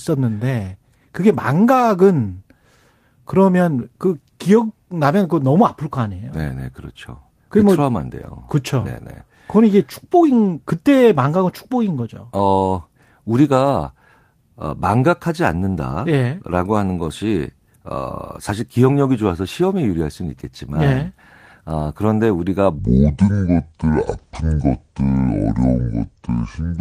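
From 22.79 s to the end, the speech turns deep and slow, roughly seven semitones lower, at 0.625 times its recorded speed. This is a section at the wrong speed, likely from playback against the wrong clock, so pitch and tempo drop together.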